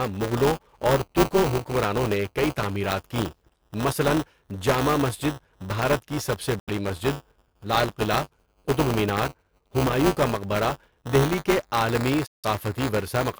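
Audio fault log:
throughout, buffer tearing. The speech carries a steady robotic buzz at 200 Hz. It is present only while there is sound and falls away in the pauses. The writer and reader of the playback buffer have slipped and cross inside each 5 ms period. About a tenth of every buffer holds audio from roughly 10 ms earlier. The hard joins on both sides of that stale piece repeat 200 times a second, which gives the buzz.
6.59–6.69 s and 12.26–12.45 s, Bluetooth dropout. The sound cuts to silence, first just after "بھارت کی سب سے" for about 0.1 s, then for about 0.18 s near the end. Each time the sound returns further along, as if it had kept playing during the gap. That points to audio packets that likely arrived too late at the headphones and were dropped, so the output held silence until good packets arrived.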